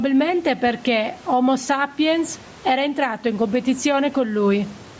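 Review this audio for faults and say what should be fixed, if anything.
Gain pumping runs through the whole clip: the gain swings by around 10 dB, pulled down under each louder stretch of speech, likely from mic gain set far too high with a fast limiter clamping down. Drop the input gain so the limiter rarely engages.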